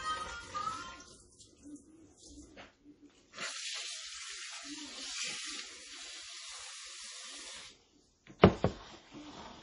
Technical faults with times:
0.00-9.63 MP3 compression

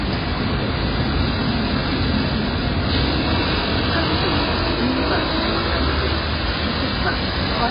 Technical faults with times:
0.00-7.70 AAC compression

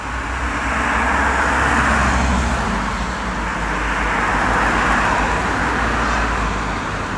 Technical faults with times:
none

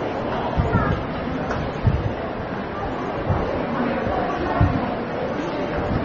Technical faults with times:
0.00-6.04 AAC compression

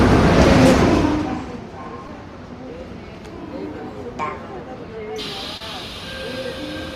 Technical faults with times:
2.07 short concealed packet loss
5.57-5.61 short concealed packet loss

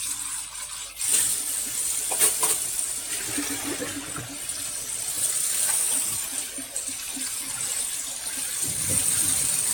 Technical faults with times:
0.00-9.74 mains hum
0.00-9.74 generation loss

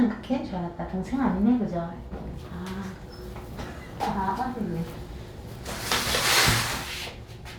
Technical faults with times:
none

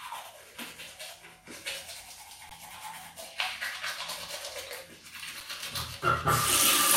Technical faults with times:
2.49 underrun with held sample
5.40 underrun with held sample

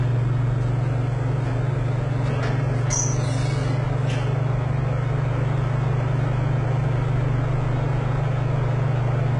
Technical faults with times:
0.00-9.40 hard clipping
0.00-9.40 HE-AAC compression

